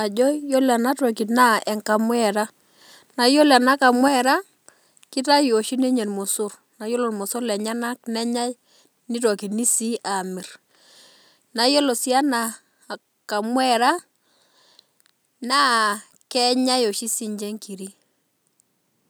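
Right after "na yiolo" the speech hits microphone overload twice, at 3.55 to 3.57 s and 3.85 to 3.87 s, with a short harsh crackle on the peaks. The input gain was likely set too high, pushing tops about 2 dB and 1 dB past the converter's limit and flattening around one percent of samples.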